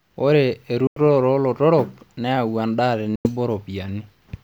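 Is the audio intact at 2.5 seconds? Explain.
Yes, at 2.5 seconds the speech runs through without any break, dropout or distortion, so the audio is intact at that moment.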